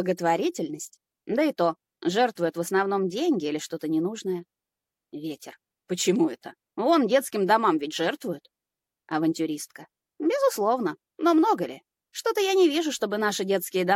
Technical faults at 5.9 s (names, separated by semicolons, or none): none